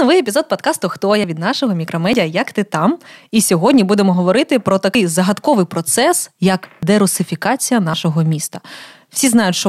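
Dropped buffers, likely from overruns, occur at 1.24 s (just before "від нашого"), 2.13 s (right after "від нашого"), 4.95 s, 6.83 s (after "загадковий процес як") and 7.94 s. At each point the speech is not silenced but jumps ahead, losing around 40 ms that was overwritten before the software collected it.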